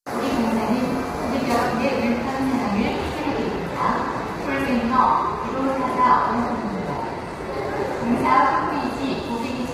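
Right from the start and all the way through, the sound is rough and grainy, with a noisy fizz filling the gaps between tones and a thin, artificial-sounding top end. That's likely heavy low-delay AAC compression, AAC-ELD, its short frames starved at something like 24 kbps.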